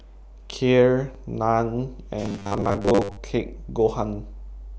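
From 2.22 to 3.18 s the speech turns into a rigid, metallic buzz fixed at 100 Hz, still loosely following the words: robotic sound from repeated short buffers. Audio likely arrived too seldom, so about half the time was filled by looping a 10 ms slice.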